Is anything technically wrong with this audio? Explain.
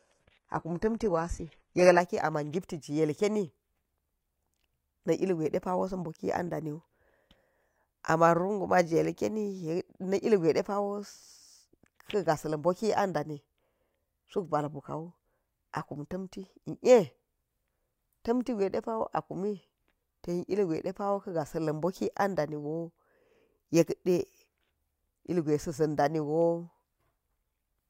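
Yes. From 0 to 2.0 s, the adaptive stream starts at a low bitrate, so the player can begin quickly. The sound is dull and smeared, with nothing above 11.9 kHz, which fits a low-rate HE-AAC tier. It then steps up cleanly, with no gap, just before "a ma̱n".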